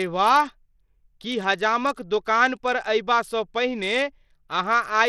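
Bluetooth SBC compression runs through the whole of this speech clip: the treble flickers and drops out, with gritty noise and aliasing riding on the voice. This is likely SBC coding at a starved bit pool, around 80 kbps by the sound, leaving upper sub-bands few bits.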